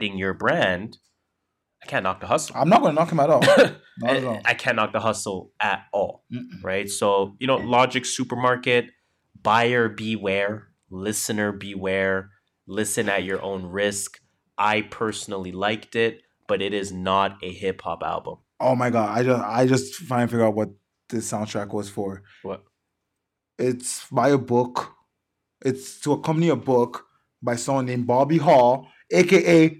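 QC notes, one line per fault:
7.45 to 8.40 s, drift correction step: the speech suddenly drags and drops in pitch by just under a semitone (about 97 cents), running 5.4% slow for nearly a second before snapping back. Likely a clock-matching resampler briefly slowing playback in one step to rebalance its buffer.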